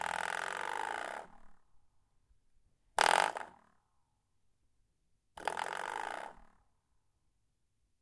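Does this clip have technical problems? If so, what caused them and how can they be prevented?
No, this clip has no technical problems, so there is nothing here to prevent.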